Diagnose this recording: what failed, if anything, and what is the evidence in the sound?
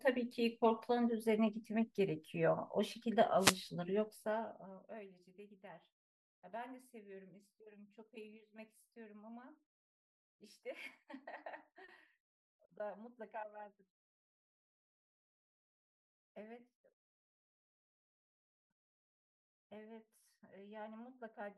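Wireless microphone noise hit, 3.39 to 3.57 s. For about 0.18 s a swish of static rises over the speech and then clears. This happens in the analogue radio link ahead of the converter. Reflected copies of the FM carrier briefly cancel at the receiver, so the signal fades toward the noise floor. The demodulator's hiss then jumps up and masks the speech until the signal returns.

Zipper noise, 4.01 to 5.12 s. A fast ticking rides on the speech while its level drops by roughly 20 dB. The ticks come about twenty times a second. Each tick marks a 1 dB gain step applied without ramping, which points to a gain stage in the driver or buffer processing that updates once per block of roughly 50 ms. Each abrupt jump puts a small discontinuity in the waveform.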